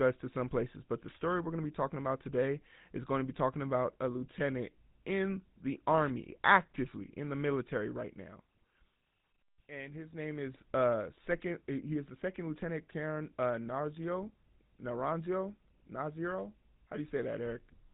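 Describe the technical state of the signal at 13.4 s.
The speech at 13.4 s carries GSM full-rate codec damage, present from start to end rather than at that moment alone. The codec rebuilds the voice from a vocal-tract model fed by evenly spaced pulses, with the rate fitting 13 kbps, so the sound turns buzzy and gravelly, and nothing reaches past 3.9 kHz. Simple telephone band-limiting would muffle the voice without that grainy pulse texture, which is plainly audible here.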